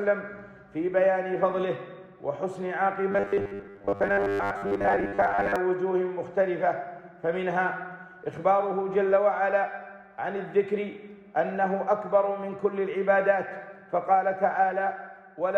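From 3.12 s to 5.56 s the sound turns into a rigid, metallic buzz pinned at 100 Hz, a robotic sound from repeated short buffers. The likely cause is audio arriving too seldom, so the same 10 ms slice is looped to fill the gaps while most of the real material is skipped. Unlike a stutter or dropout, the buzz holds a steady pitch while the sound's overall shape still comes through roughly.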